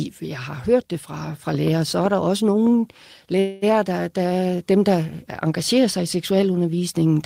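At 3.39 s the speech stops moving forward. A call audio freeze runs until 3.64 s. For about a quarter of a second, the last sound is stretched into a buzzy hiss that fades. Nothing after it is lost. The speech resumes exactly where it stopped, now 227 ms later than before. The likely cause is packets held up in transit, leaving the jitter buffer empty until they arrived.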